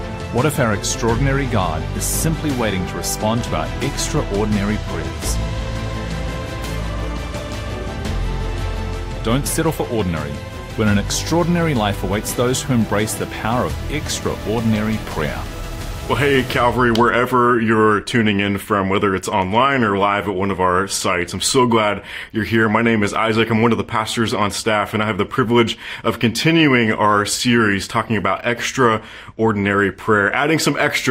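No technical faults are audible.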